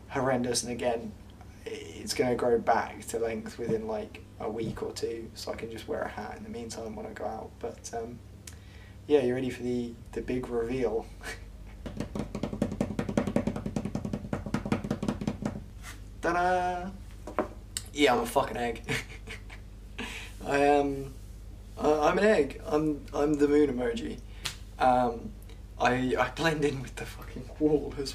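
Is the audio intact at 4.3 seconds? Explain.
No. A repeated buffer sounds from 4.28 to 4.32 s. One short piece, consistent with a 20 ms buffer, plays twice more with hard joins, giving a brief stutter.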